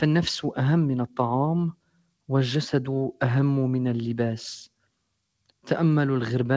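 Between 1.72 and 2.29 s the audio sinks sharply, dipping by about 19 dB at its deepest, for roughly 0.4 s in total. Steady or decaying parts thin out or die early while sharper onsets still come through. This is sound cut by the noise suppressor: it mistook this material for background noise and turned it down. The clip travelled a call path with nothing above 8 kHz, consistent with a wideband codec like G.722.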